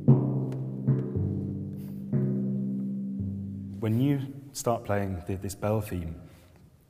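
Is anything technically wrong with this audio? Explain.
No, nothing technically wrong turns up anywhere in this audio.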